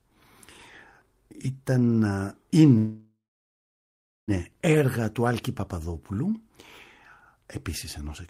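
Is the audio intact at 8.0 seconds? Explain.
Yes, the audio is intact at 8.0 seconds, with no fault to be heard at that moment.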